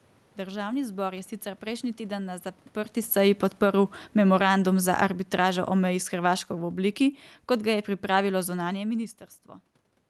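Just after "prejšnji teden na zaprti", at 3.12 s, automatic gain falling begins. The gain control judged the input too loud or its background noise too strong. It lowered its gain slowly, by about 10 dB, until 9.03 s. The speech and the room noise sink together.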